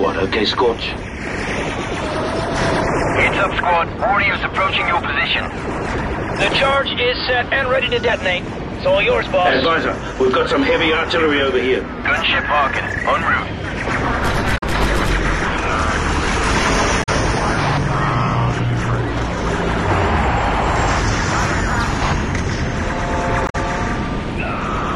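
Damaged data in a compressed stream appears three times, at 14.54 to 14.63 s, 16.99 to 17.09 s and 23.45 to 23.55 s, each burst lasting about a tenth of a second. At each point the encoded bytes reaching the decoder were corrupted, so it misread those frames, lost its place in the stream and had to hunt for the next valid frame header. Each event sounds like a brief chirp, squawk, click or short hole cutting across the audio.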